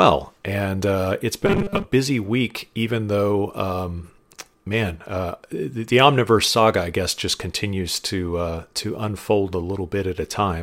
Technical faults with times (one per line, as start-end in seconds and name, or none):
1.46-1.84 robotic sound from repeated short buffers